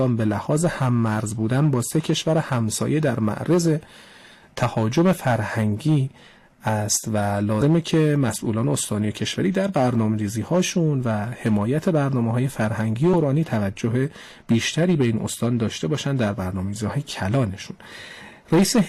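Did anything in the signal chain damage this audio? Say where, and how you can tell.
Yes. At 7.61–7.65 s and 13.13 s the audio jumps ahead. Compressed frames were skipped at the codec, dropping a few 20 ms frames each time.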